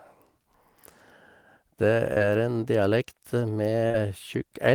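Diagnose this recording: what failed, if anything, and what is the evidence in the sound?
Short concealed packet loss on the network path: at 2.13 to 2.22 s and 3.88 to 3.96 s the speech smears and wobbles, each time over two back-to-back 20 ms gaps, which fits lost 20 ms packets. The decoder continued the preceding sound across them, so unlike a buffer dropout there is no silent hole.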